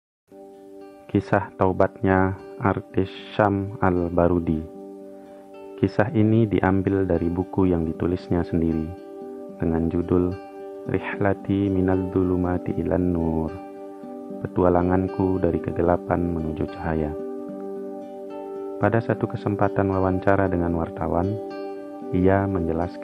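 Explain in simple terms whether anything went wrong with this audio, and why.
Nothing went wrong here: listening through, I couldn't find a single glitch, dropout or distortion to point to, so there's nothing to explain.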